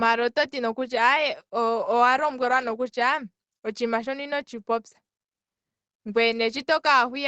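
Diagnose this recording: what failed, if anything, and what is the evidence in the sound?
Nothing has failed in this speech recording. What can be heard is the ordinary shape of a call chain: the lowest bass is trimmed by the microphone processing's high-pass filter, and the Opus codec on the WebRTC path caps the top end at 8 kHz.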